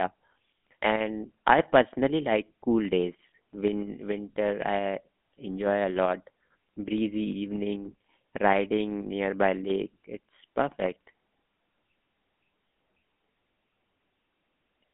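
Throughout, a GSM full-rate codec rebuilds the speech from coarse pulse excitation, leaving a plainly buzzy, gravelly roughness within a 200 Hz to 3.5 kHz band.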